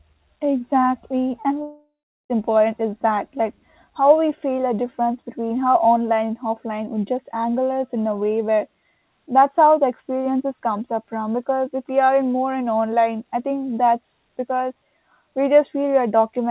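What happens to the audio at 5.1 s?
Nothing goes wrong at 5.1 s: the speech passes through intact, with only the narrow band of a G.711 call path, which carries nothing above 4 kHz.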